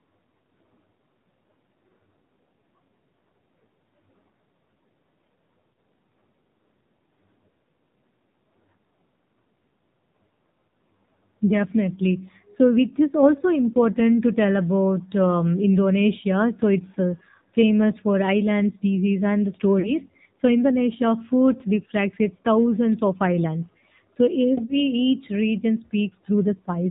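It's a speech recording, and the whole thing has come through the AMR narrowband mobile codec. Everything above 4 kHz is gone, and the voice has that buzzy, synthetic edge you get when the vocal-tract model is only given a few pulses to work with. The damage is plainly audible, which fits a low mode around 7.4 kbps, so it's more than just a thin phone-line sound. There are also three spots with lost AMR speech frames. At 5.77 s there's a tiny dip, consistent with a single 20 ms frame where the decoder just carried the previous pitch and spectral settings forward at reduced gain. The longest one runs from 19.80 to 19.91 s, right after "island species and the". That gap fits about 40 ms of lost frames, so the sound smears and sags before the voice returns a bit rough. The third is a short warble from 24.66 to 24.73 s, again the size of one lost frame's worth of concealment.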